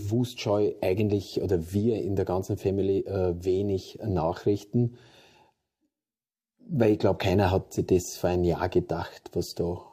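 No technical faults can be heard anywhere here.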